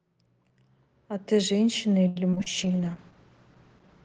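From 2.07 to 2.48 s, the speech breaks up with repeated packet loss. Five gaps fall close together, the longest 84 ms. Each is filled by stretching the last sound, so about 40% of the span is patched. It sounds choppy and robotic.

At 2.59 s a call bitrate drop begins and lasts to the end. The encoder codes far more coarsely, which fits a fall from 32 to 12 kbps. Bandwidth shrinks from 20 kHz to 8 kHz. The speech turns muffled and rough.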